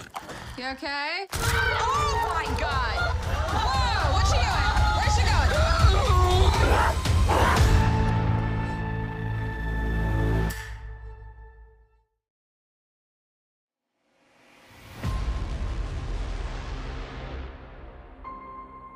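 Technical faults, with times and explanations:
Nothing stood out as a technical fault on listening.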